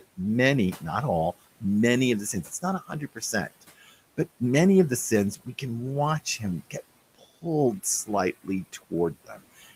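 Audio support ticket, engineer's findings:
Speech cut by the noise suppressor at 2.33–2.64, 2.80–3.34, 3.50–3.92, 7.15–7.44 and 9.14–9.43 s. Soft speech portions are pulled down about 11–17 dB along with the room noise, which sits about 21 dB below speech. Speech sounds swallowed but never goes fully silent, which separates this from a dropout.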